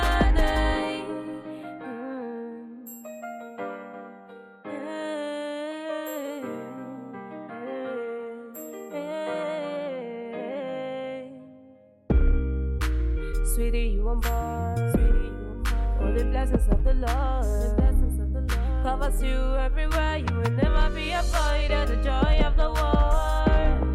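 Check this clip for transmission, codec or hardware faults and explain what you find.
No faults found; nothing audible in the recording warrants flagging.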